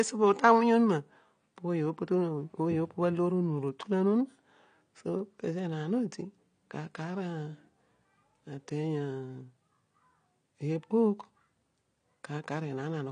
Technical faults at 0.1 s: AAC compression

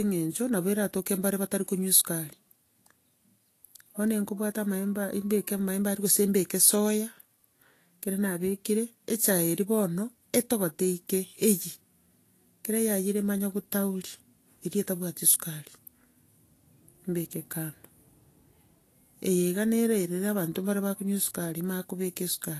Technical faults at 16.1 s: Vorbis compression

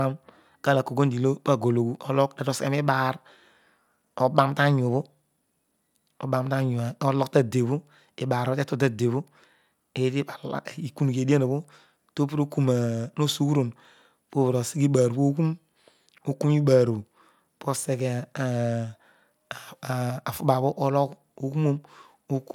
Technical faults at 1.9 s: none

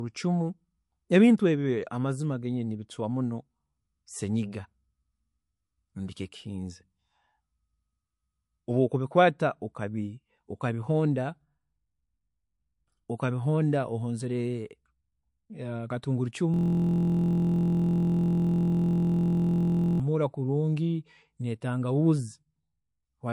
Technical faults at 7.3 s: MP3 compression

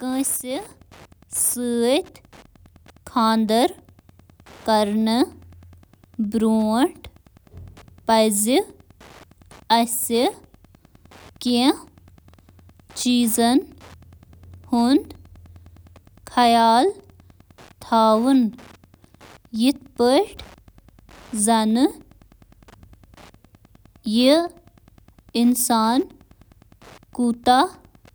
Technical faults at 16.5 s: Wi-Fi interference

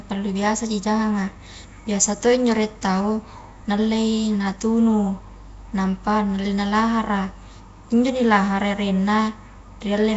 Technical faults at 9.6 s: Nellymoser compression

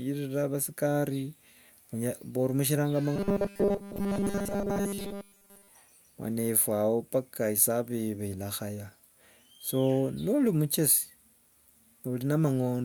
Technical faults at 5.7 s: robotic sound from repeated short buffers

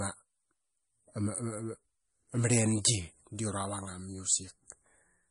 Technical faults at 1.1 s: MP3 compression

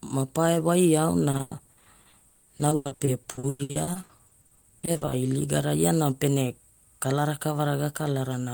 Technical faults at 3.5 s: repeated packet loss (robotic sound)

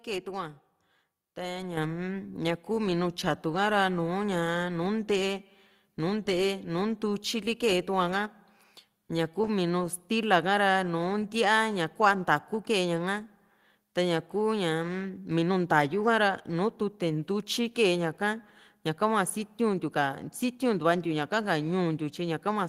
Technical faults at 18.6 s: none

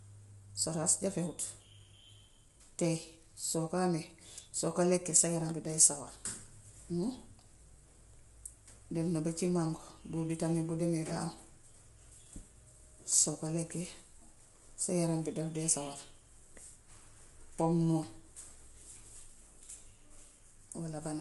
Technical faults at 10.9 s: low-delay AAC compression

